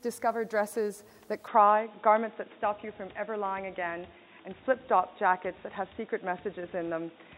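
At 1.48 s the sound abruptly turns dull and boxy through to the end, with nothing above 3.8 kHz, a level shift of about 5 dB and a new faint noise floor. Unlike a plain filter, the changed noise and level point to an input likely switched to a poorer device, with no gap at the switch.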